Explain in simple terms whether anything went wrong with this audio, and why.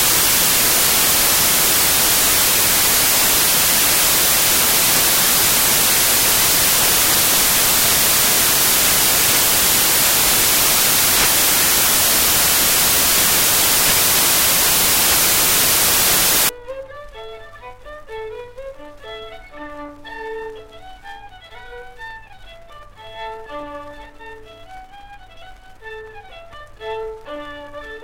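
Samples built from the wrong bytes, from the very start until about 16.49 s. Every sample in digital audio is stored as a small group of bytes, and here the player stitched those bytes together in the wrong way, as if it had started one byte off or read them in reverse order. The tiny, rapidly changing details ended up as the loudest part of each value, so that whole stretch comes out as harsh, loud hiss.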